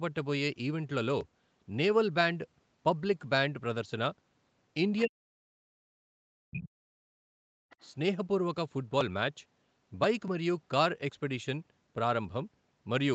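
From 5.04 to 5.87 s the talker's speech sinks sharply, dropping by roughly 40 dB at its deepest and thinning or vanishing in pieces for about 0.7 s in total. The same thing returns from 6.14 to 7.53 s, this time affecting around 1.5 s. This is likely speech suppressed in double talk: with both ends speaking at once, the echo canceller could not tell the near talker from loudspeaker echo and pulled everything down.

Right after, from 7.7 to 7.89 s, a faint second voice slips through, sitting around 30 dB below the main speech. That is likely the other side's voice leaking through, where part of the far end's loudspeaker sound reached the microphone and escaped echo cancellation. Across the clip nothing reaches above 8 kHz, consistent with the call's band-limited Opus path.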